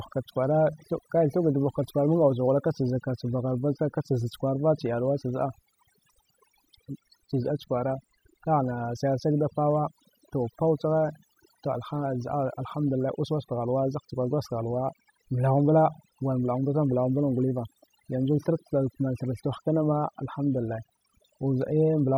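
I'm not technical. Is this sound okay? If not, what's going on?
No. The recording went through overdone noise removal: a clean-up tool was pushed too hard, so it shut off any slice of the sound it judged too close to the background hiss, including the softer parts of the voice. Throughout the speech, the gaps fall to an unnatural near-silence dotted with small twinkling, chirpy specks.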